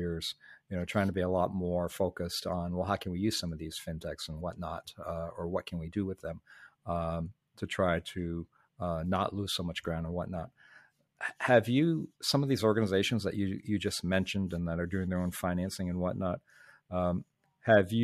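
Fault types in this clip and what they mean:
Nothing to flag here; no faults turn up anywhere in the recording.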